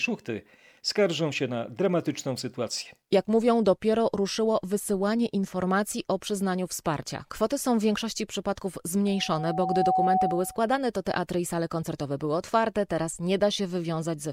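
From 9.06 to 10.71 s, loudspeaker feedback squeal: a steady 748 Hz tone swells over roughly 0.7 s to sit slightly above the speech, unlike broadband hum or noise.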